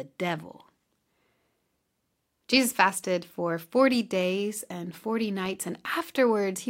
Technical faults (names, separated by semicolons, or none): block of digital silence